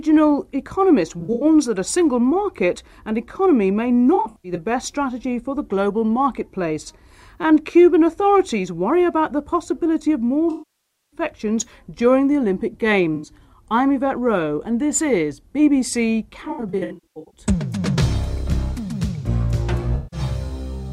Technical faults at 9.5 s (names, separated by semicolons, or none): none